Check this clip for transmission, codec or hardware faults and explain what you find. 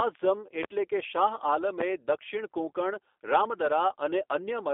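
Two faults are present: G.729 codec coding across the whole clip, and two loud pops.

Throughout, the speech sits in a 300 Hz to 3.6 kHz line band with nothing above 3.6 kHz, consistent with an 8 kbit/s G.729 stream. The decoder rebuilds each frame from a vocal tract filter, pitch predictor and a few pulses, so consonants are dull and the voice sounds plainly rough and synthetic.

Loud pops occur at 0.63 to 0.66 s and 3.66 to 3.69 s, each a single sharp hit of about 30 ms, around 20 dB and 15 dB above the speech respectively. The likely cause is a voltage step or pulse from a switch, connector or static discharge, which the following circuitry shapes into a click while the speech continues underneath.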